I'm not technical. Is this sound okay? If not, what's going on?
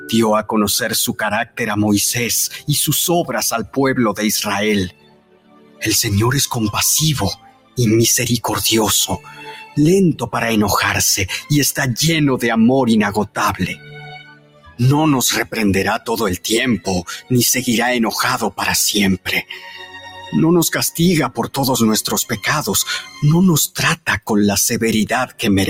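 No. Throughout, the audio keeps rising and falling in loudness on its own, with a pumping, fluttery quality, and held or fading parts seem to shrink away while sharp starts stay clear. That is a noise suppressor applied to music or sounds: a filter built to clean up speech was left switched on, and it treats steady tones, room sound and echo tails as unwanted noise and keeps turning them down.

In three stretches, from 0.0 to 5.84 s, 7.35 to 11.51 s and 13.28 to 25.41 s, particular parts of the audio suddenly drop away or get cut off early instead of fading out naturally. This is sound cut by the noise suppressor. The filter mistook those sounds for noise and pushed them well below everything else, adding up to about a second and a half in each of the first two stretches and around four seconds in the last.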